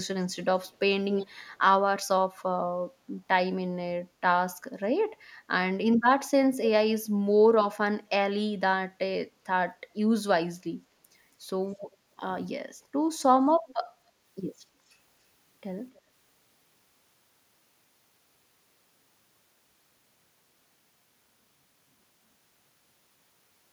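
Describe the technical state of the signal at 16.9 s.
At 16.9 s the audio is intact, with no fault of any kind at that moment.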